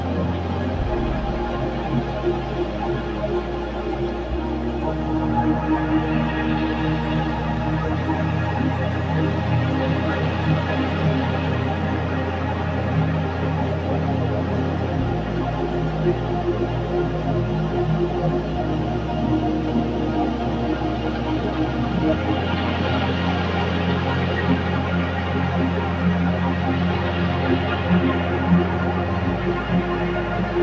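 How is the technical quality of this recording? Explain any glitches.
No glitches or technical faults can be heard here.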